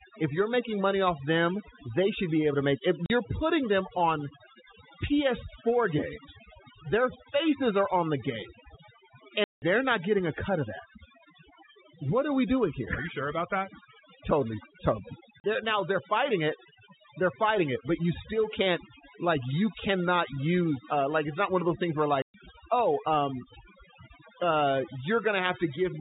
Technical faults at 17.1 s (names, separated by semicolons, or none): overdone noise removal